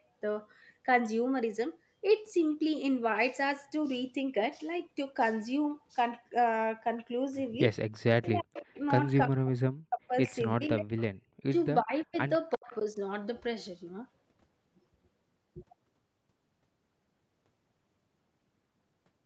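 Speech recording with echo-canceller trouble in its middle section. Speech suppressed in double talk from 8.2 to 10.92 s and again from 11.52 to 12.97 s: the voice dips by as much as roughly 40 dB in pieces, likely because the canceller confused the talker with loudspeaker echo during simultaneous talk. Echo leak at 8.41–8.8 s, 10.65–11.04 s and 11.81–12.82 s: a copy of the voice delayed by 346 ms comes through well below the main speech, likely from residual loudspeaker pickup the canceller did not fully remove. The background is gated by the echo canceller at 11.2–11.33 s, where the room sound drops by about 34 dB and returns once the canceller releases the microphone.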